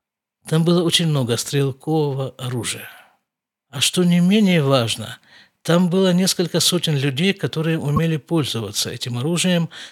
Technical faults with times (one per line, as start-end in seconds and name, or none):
7.96-7.99 damaged data in a compressed stream